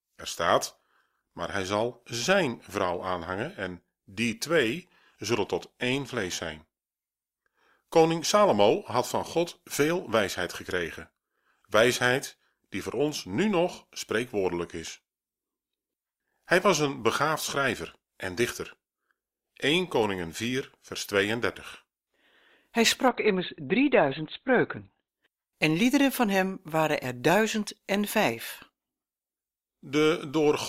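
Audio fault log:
23.08–25.08 s, adaptive stream at a lower bitrate: For two seconds the speech suddenly turns dull, with more codec artefacts, then snaps back just before "en liederen van hem". There is no gap at either edge. Nothing is heard above 4.3 kHz in that stretch. The player switched to a cheaper version of the stream when the connection slowed. The sound fits a drop from Opus at 64 kbit/s to about 12 kbit/s, where the encoder discards the treble.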